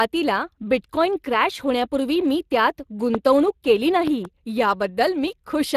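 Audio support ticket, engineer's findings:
Speex codec, whole clip: speech has a plainly audible hoarse, noisy grain from CELP coding with too little excitation detail, consistent with a setting around 22 kbps. Content stops at about 15.3 kHz. Unlike transform-codec artefacts, the damage is rasp rather than swirling or metallic warble.

Loud pop, 3.15–3.17 s, right after "क्रॅश होण्यापूर्वी मी त्यात": a single sharp transient about 20 dB above the signal, likely a voltage step from a plug, switch or static discharge. Speech continues beneath it, so this is an added impulse, not a dropout or a gap.

Loud pop, 4.07–4.27 s: two pops in quick succession, peaking roughly 10 dB above the signal. The cause is likely again an electrical step, shaped by the following circuitry. Because the two separate impulses ride on uninterrupted audio, this is not codec breakup.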